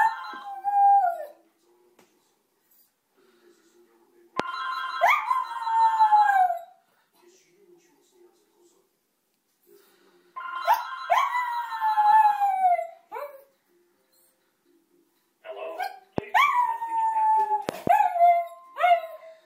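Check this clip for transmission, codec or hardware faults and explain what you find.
Loud pops interrupt the audio at three points, at 4.40–4.42 s, 16.18–16.20 s, and a double pop at 17.69–17.89 s. Each is likely a voltage spike from a switch, plug or static discharge, heard as a sharp crack over the continuing sound, standing around 15 to 20 dB above it, and showing as a narrow spike on the waveform and a thin full-height vertical stripe on the spectrogram.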